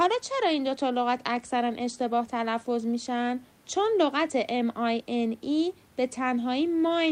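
Nothing stood out on listening to this speech, apart from a faint room noise sitting about 34 dB below it, which is part of the recording itself.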